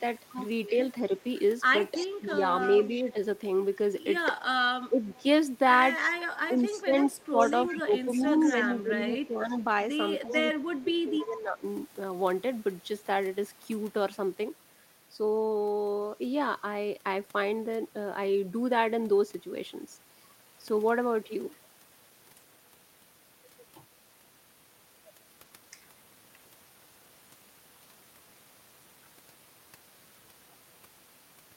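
From 1.94 to 3.13 s an echo leak appears: a faint copy of the speech trails the original by 316 ms, about 15 dB down. The likely cause is a loudspeaker at the far end whose echo canceller let part of the pickup return. On a spectrogram the harmonic pattern repeats, shifted right by about a third of a second and much paler. The same leak returns from 5.13 to 10.45 s, about 20 dB below the speech, with the same 316 ms lag.

Overlapping that first echo, from 2.2 to 3.17 s, the speech is suppressed in double talk. The level sags by roughly 5 dB over about 0.3 s in total, likely because the canceller could not separate its own talker from the returning echo and attenuated both. A deeper dip of around 10 dB follows at 4.9 to 5.25 s, again likely from the same cause. The heaviest case runs from 6.48 to 11.64 s. There the speech drops by up to roughly 15 dB across about 3 s in all, likely the canceller clamping down while the second echo plays. 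The waveform envelope shows these as carved-out troughs.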